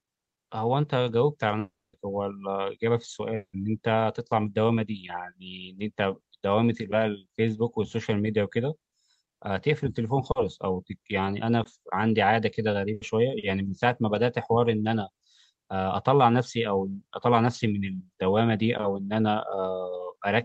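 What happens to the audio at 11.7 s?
Short concealed packet loss, 11.63–11.67 s: 20 ms was rebuilt by extending the preceding sound, giving a brief smear rather than a dropout's silent gap.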